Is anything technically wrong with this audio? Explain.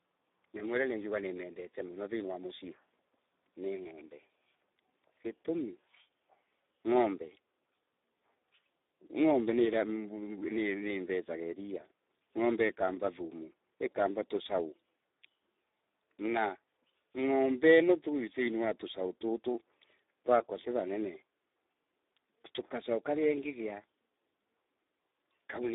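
Yes. Throughout, the speech carries Speex codec damage. Few bits reach the excitation, so it sounds hoarse and noisy, fitting roughly 8 kbps. It spans only 300 Hz to 3.7 kHz, with nothing above 3.8 kHz.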